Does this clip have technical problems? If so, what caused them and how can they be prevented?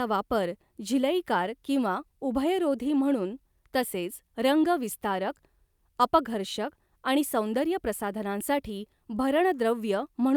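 No, nothing technical goes wrong anywhere in this speech recording, so there's no cause to track down and nothing to prevent.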